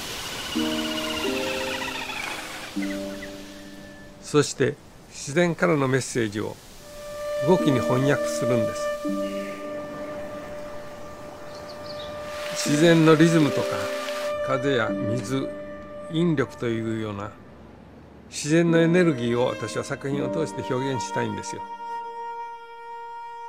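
No technical faults are audible anywhere in this audio.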